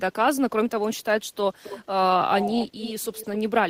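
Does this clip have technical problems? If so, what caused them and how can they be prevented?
Yes. A faint delayed copy of the speech trails the original from 1.63 to 1.8 s and again from 2.39 to 3.38 s, lagging by 265 ms. It sits about 15 dB below the speech at first and about 10 dB below later. This is echo leak, likely from a far-end loudspeaker whose echo canceller let residual pickup return. Unlike room reverberation, it is a distinct repeat at a fixed delay, not a smooth decaying tail. Using a headset or a better-tuned echo canceller would prevent it.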